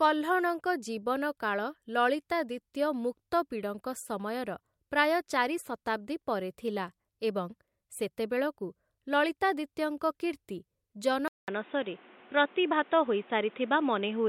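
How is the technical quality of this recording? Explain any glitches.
One glitch affects the recording. At 11.28 s the input likely switched to a poorer device: after a 200 ms gap, everything above 3.8 kHz vanishes, the speech turns boxy, and new background noise appears.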